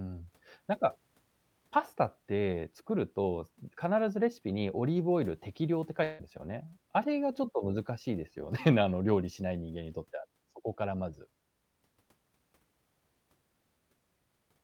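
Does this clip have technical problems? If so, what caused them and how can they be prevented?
Yes. From 6.03 to 6.21 s the speech breaks into a buzzy, fading smear of the last sound for about 150 ms, with no stretch of true silence, and when the speech resumes roughly 160 ms of it is simply gone. This is a long network dropout: the stream was likely interrupted, so the receiver stretched the final fragment it had to fill the gap and then skipped ahead. A steadier connection and a larger jitter buffer would prevent it.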